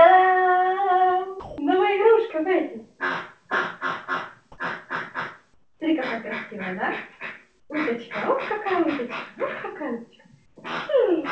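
From 1.40 to 1.58 s, about 160 ms of the sound gives way to steady, even noise. This is likely sound dropped by the voice detector, which mistook it for background. The waveform shrinks to a low, uniform band, and the spectrogram shows smooth, structureless noise until the sound returns.

At 5.54 to 5.80 s, 7.60 to 7.70 s and 10.46 to 10.56 s, each gap is likely comfort noise in place of the background. The real background, about 45 dB below the loudest sound, becomes featureless hiss about 5, 8 and 3 dB quieter. These gaps show as flat, evenly textured patches that end at 8 kHz, like the rest of the G.722 call audio.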